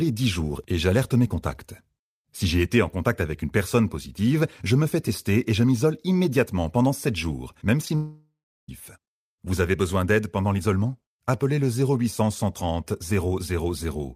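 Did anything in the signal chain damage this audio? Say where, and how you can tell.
Yes. The damage happens in the network stage. Right after "jours même" there is short concealed packet loss at 7.85 s and again from 7.88 to 7.90 s. Each is a tiny smear or wobble. The decoder patched about 10 ms each time by extending the preceding sound.

A long network dropout follows, from 7.95 to 8.69 s. The last sound is stretched into a fading buzz, and then about 0.36 s of silence remains. Speech resumes with roughly 0.73 s missing. The likely cause is packets that stopped arriving and were never recovered.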